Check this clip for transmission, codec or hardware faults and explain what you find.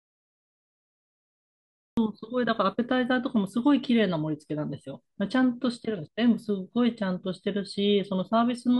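There is one fault, a cut-off start. From 0 to 1.97 s the file holds pure digital silence, then speech appears abruptly at 1.97 s, mid-sound, because capture began late. The waveform jumps from a flat line straight into the speech waveform, and the spectrogram shows a hard vertical edge with no attack or fade.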